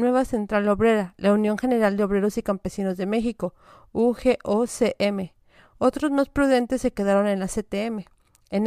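Nothing in this bit of speech catches the ear as a technical problem, so there's no fault to walk through here.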